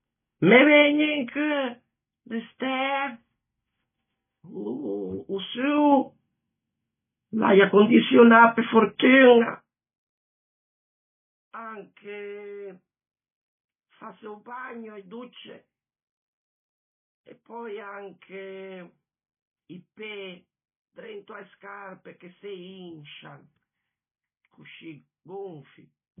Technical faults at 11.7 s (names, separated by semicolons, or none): MP3 compression